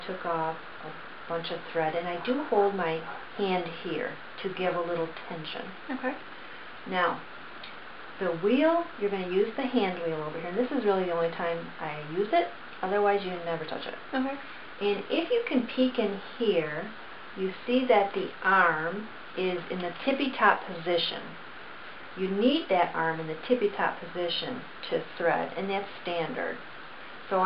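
No technical faults are audible.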